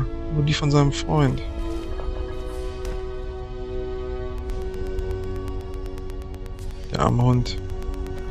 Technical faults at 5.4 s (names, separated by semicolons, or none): train of clicks